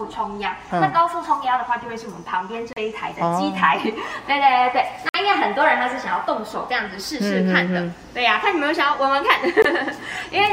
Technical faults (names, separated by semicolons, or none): Bluetooth stall